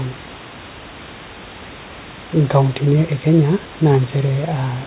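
Nothing stood out on listening to this speech, which sits about 18 dB above the room noise and carries nothing above 4 kHz, as expected from a G.711 mu-law call path.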